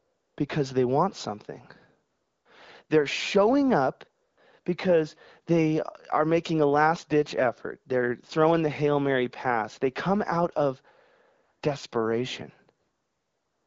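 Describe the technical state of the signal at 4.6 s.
Between 4.61 and 4.65 s, after "showing up" and before "because they are making", AMR comfort noise replaces 40 ms of the signal. The sender judged the talker silent and stopped sending speech frames, so the receiver filled the gap with smooth synthetic noise in place of the real background.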